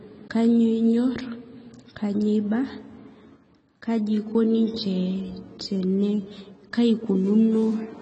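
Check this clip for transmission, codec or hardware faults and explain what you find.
One fault runs through the whole recording: AAC compression. Nothing in the speech reaches above 8.3 kHz, and the codec damage is plainly audible, with a dull, smeared quality and a fizzy, warbling edge on sibilants. That pattern fits AAC-LC at a low bitrate around 24 kbps. The encoder quantises each frame's spectrum coarsely and discards the top band. A simple low-pass filter would cut the highs just as cleanly but leave no swirling texture in what remains.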